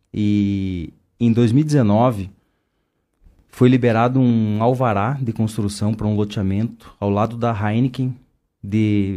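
No technical faults can be heard anywhere in the speech recording, with the signal staying steady and intact throughout.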